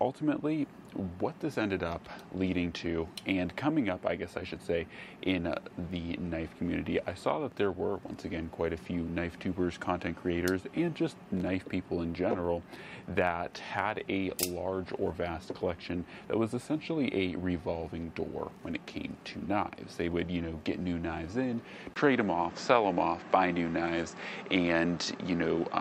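At 21.94 s the sound drops out for a brief 20 ms gap and then returns duller and boxier, with nothing above 8 kHz, a level shift of about 5 dB, and faint new background noise sitting well beneath the signal. It stays that way to the end. This is likely an input switched to a poorer device: the recording chain jumped to another microphone or a headset's call profile, with its narrower band, different tone, gain and noise floor.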